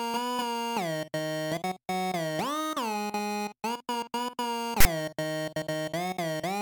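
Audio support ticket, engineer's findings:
Harsh, loud rasp, hard-edged, sitting off to one side, 4.80–4.85 s (about 47 ms). Symptom: sudden static burst, abrupt onset and cutoff. Component: file parser/decoder. Mechanism: file tags played as audio. A text tag block is read as sample data, and the character bytes land as a lopsided, buzzy waveform. Fix: skip metadata chunks before decoding.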